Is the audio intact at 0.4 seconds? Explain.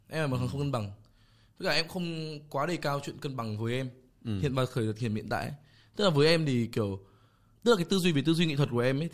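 Yes, at 0.4 seconds the speech plays through intact, with no dropout, click, distortion or other fault at that moment.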